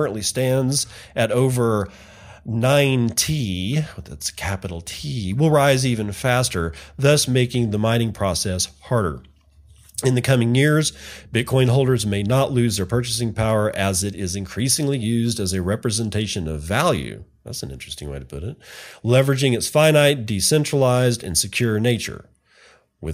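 Listening through the speech, nothing stood out as a technical fault at any point.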